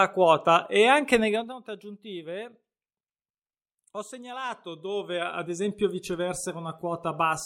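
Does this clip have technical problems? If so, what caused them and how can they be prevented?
Yes. Zipper noise at 1.2–1.56 s and 4.44–5.68 s: the speech drops roughly 15 dB in 2 dB jumps, then rises roughly 15 dB in 1 dB jumps, about 30 per second, each unsmoothed jump ticking audibly. Ramping gain smoothly per sample prevents it.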